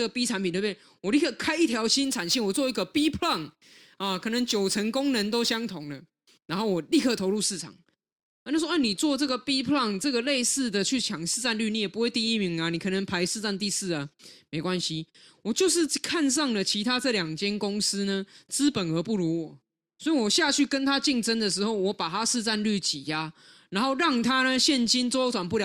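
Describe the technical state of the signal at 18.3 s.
Around 18.3 s the signal is intact, with no audible technical fault at that moment.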